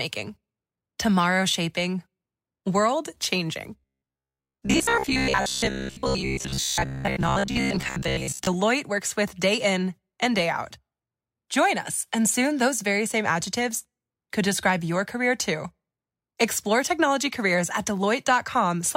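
From 3.79 to 8.47 s, robotic sound from repeated short buffers: a rigid 66.7 Hz buzz, likely from a roughly 15 ms buffer being replayed while most incoming audio is skipped. The spectrogram shows evenly spaced harmonic lines.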